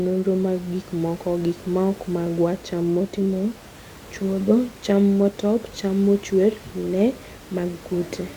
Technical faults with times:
none

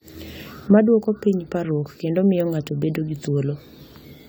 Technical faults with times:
0.00-4.28 generation loss

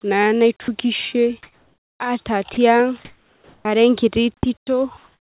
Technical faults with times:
0.62-0.68 sound dropped by the voice detector
1.43-2.00 comfort noise in place of the background
2.54-2.57 sound dropped by the voice detector
3.05-3.65 comfort noise in place of the background
4.40-4.43 onset clipped by the voice detector
4.97-5.24 comfort noise in place of the background

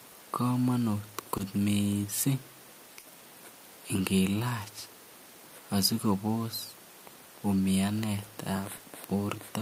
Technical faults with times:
1.37-1.41 short concealed packet loss
2.99-3.07 burst of packet loss
8.77-8.81 short concealed packet loss

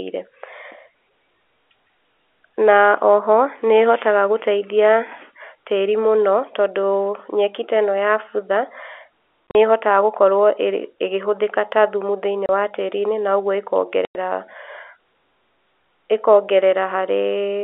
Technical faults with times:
9.50-9.55 packet loss filled with silence
12.46-12.49 packet loss filled with silence
14.05-14.15 packet loss filled with silence

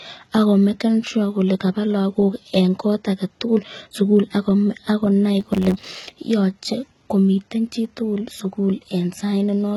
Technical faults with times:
0.00-9.76 HE-AAC compression
5.40-6.15 block size mismatch (truncated)

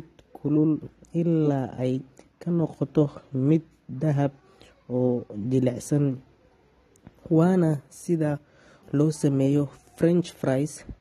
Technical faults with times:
0.00-11.01 AAC compression

